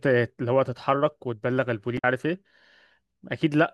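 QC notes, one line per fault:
1.95–2.04 s: damaged data in a compressed stream. For about 90 ms, part of this speech clip's encoded stream is corrupt, so the decoder misreads those frames, loses sync and hunts for the next valid frame header, giving a brief chirp or squawk. On a spectrogram it shows as a narrow vertical smear of broadband or tonal energy unrelated to the surrounding formants; the waveform shows an abrupt, irregular burst with hard edges where the signal resumes.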